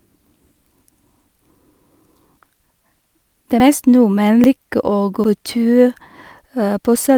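At 0.92, 2.64, 3.6, 4.44 and 5.24 s the speech jumps forward with no gap, most likely a dropped buffer (overrun) where samples were overwritten before being read. Each skip loses a few tens of milliseconds, the one at 5.24 s closer to a tenth of a second.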